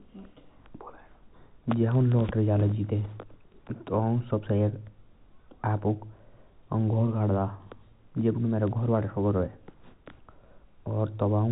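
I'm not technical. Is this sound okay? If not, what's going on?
Yes, nothing is wrong with this speech; its narrow, phone-like sound is simply what normal G.711 telephone coding produces.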